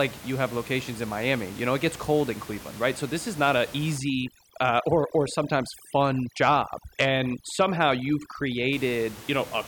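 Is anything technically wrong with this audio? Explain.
Yes. From 3.98 s to 8.73 s, just after "this is not an", there is overdone noise removal. The room noise sits about 18 dB below the speech. An aggressive noise reducer cuts frequency bands near its noise estimate. Quiet speech detail vanishes with them. The background drops and breaks up into twinkling specks.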